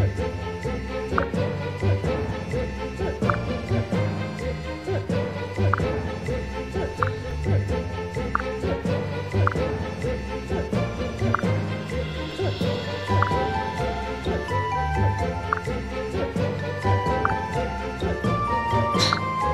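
The audio was cut into 5-second chunks that were joined with overlapping chunks, so each new chunk began about 7 ms before the previous one ended. That sliver plays twice at every seam, producing a brief click or stutter at 2.30, 7.31, 12.32 and 17.32 s.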